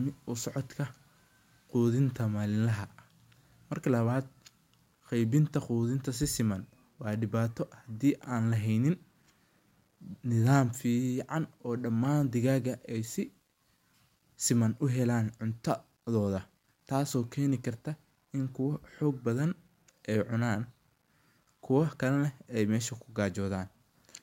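Throughout the speech there is a grainy, gritty distortion that follows the voice and vanishes in pauses, unlike steady hiss. It is likely low bit depth without dither, rounding to something like 10 bits, leaving error roughly 45 dB below the signal.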